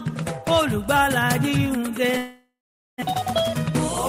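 From 2.17 s to 3.04 s the sound breaks into a fading buzz that decays to near silence, with about 420 ms of quiet, then resumes with roughly 600 ms of material gone. This is likely a long network dropout, with the receiver filling the gap.

Between 3.11 s and 3.71 s a jitter buffer speed-up follows. After the delay grew by around 200 ms, the receiver trims short pitch-period slices, about 50 ms in total, so the audio plays at 107% speed without a pitch change and sounds slightly hurried.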